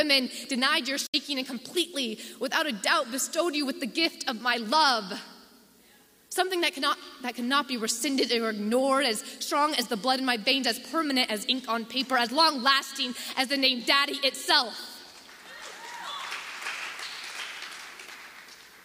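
A digital broadcast dropout mutes the audio from 1.06 to 1.14 s after an 8 ms fade, losing 64 ms of programme, which fits two failed frames. It appears as a flat waveform gap and a blank vertical stripe on the spectrogram.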